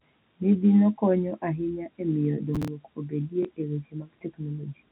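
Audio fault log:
2.54–2.68 s, processor overload crackle: for about 0.14 s the sound breaks into gritty crackle, consistent with around ten audio buffers of roughly 10 ms each missing their deadlines in succession. Each missed buffer was skipped rather than held, so the sound jumps forward with a hard edge every time. On a waveform this appears as a cluster of abrupt discontinuities. A spectrogram shows closely spaced vertical broadband streaks that stop once the load eases.
3.43–3.45 s, packet loss with last packet repeated: a small blip, which points to a single lost 20 ms packet that the receiver filled by replaying the preceding one. In the waveform, one 20 ms segment repeats the segment before it. The spectrogram shows the harmonics briefly duplicated over that stretch. This sits on top of the G.711 A-law telephone band, which stops at 4 kHz.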